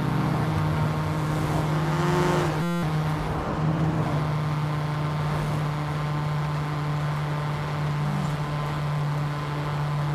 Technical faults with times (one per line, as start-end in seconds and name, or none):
2.62-2.83 system hang loop